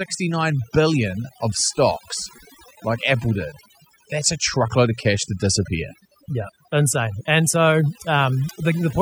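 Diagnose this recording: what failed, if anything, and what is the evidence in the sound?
Throughout the speech, the gaps fall to near silence dotted with twinkling specks. That is overdone noise removal: a noise reduction tool set too hard cuts frequency bands near its noise estimate, taking quiet parts of the voice with them.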